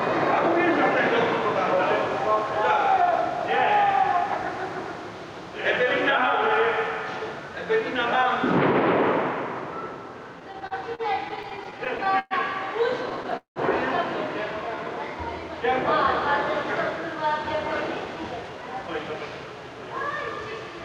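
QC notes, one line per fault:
Throughout, gain pumping: the level is pushed down under each loud sound, with a swing of around 10 dB, so loud and soft events sit unnaturally close in level and the whole clip sounds squashed. The likely cause is input gain set far too high, with a fast limiter or compressor clamping each peak. Unlike a steady level fault, the level dips in time with the loud sounds.
10.39 to 12.34 s and 13.09 to 13.59 s, repeated stalls (stutter): the audio keeps catching and holding. The first run has eighteen brief holds totalling 354 ms, the longest 117 ms, covering 18% of that span. The second has five holds totalling 224 ms, covering 45% of the span, and one lasts 191 ms, long enough to fade. Late packets left the jitter buffer empty, and the receiver extended the last sound each time. Nothing is lost, which sets this apart from dropouts. The sound drags and stutters rather than skipping.
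14.68 to 14.85 s, jitter buffer slow-down: 45 ms of material was added in this short stretch, so it plays at 78% speed at unchanged pitch and sounds briefly drawn out. The receiver was refilling a low buffer by repeating single pitch periods or slices of quiet. Unlike the stalls, nothing freezes or fades. The sound just stretches.
16.65 to 19.46 s, jitter buffer speed-up: the sound runs at 111% speed with pitch unchanged, and about 0.3 s is trimmed across the span, so events feel hurried. The receiver had more buffered than it wanted and cut short pieces repeatedly to reduce delay. This is the mirror of the slow-down: time is removed rather than added, and no holds or gaps are heard.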